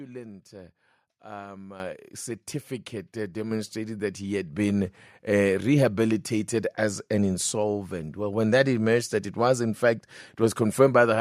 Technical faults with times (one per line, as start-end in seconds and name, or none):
1.80 microphone volume stepped up
3.51 microphone volume stepped up
4.53 microphone volume stepped up